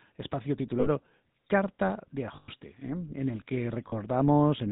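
Throughout, the speech carries the buzzy, gravelly grain of the GSM full-rate codec, which fits 13 kbps full-rate coding. It models the vocal tract and excites it with sparse regular pulses, and it removes everything above 4 kHz. That grain is what separates it from plain telephone band-limiting, which only dulls the sound without roughening it.

Lost GSM frames occur from 0.80 to 0.88 s (60 ms), from 2.36 to 2.49 s (120 ms), and from 3.88 to 3.94 s (40 ms), just after "el que". In each gap the last good frame is repeated, so you hear a metallic, ringing smear instead of a hard cut to silence or a click.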